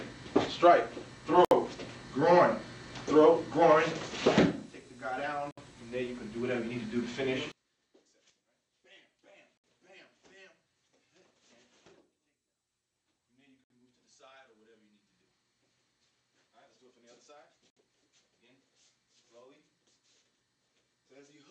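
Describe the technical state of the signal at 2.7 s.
The signal at 2.7 s is intact, with no audible dropout, distortion, glitch or other fault at that moment.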